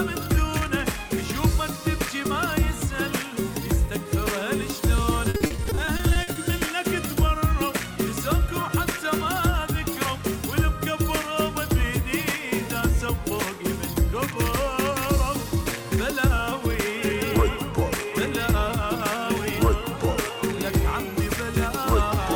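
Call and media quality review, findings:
Repeated packet loss (robotic sound), 5.29–6.37 s: network/jitter buffer path. Twelve gaps, longest 50 ms, about 30% of the span concealed by extending prior sound. Choppy, robotic texture with pieces missing.

Bit error spike, 20.09 s: memory or digital link fault, two adjacent samples with a flipped bit jumping by a power of two. Heard as one sharp broadband tick unrelated to the surrounding sound.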